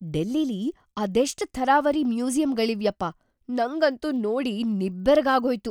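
Right through the speech there's a steady tick at 25 Hz, only while sound is present. That's a resampler restarted on every block: each 40 ms chunk was converted separately, likely a 44.1 to 48 kHz step, leaving a small error at every block edge.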